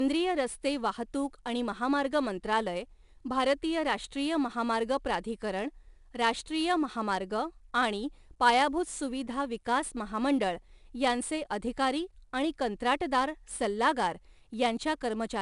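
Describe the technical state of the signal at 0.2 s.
At 0.2 s the speech carries 4-bit ADPCM compression, present throughout. Coarse adaptive steps leave gritty hiss riding each loud syllable. The spectrogram shows a noise haze and nothing above 10.6 kHz, which fits roughly 89 kbps.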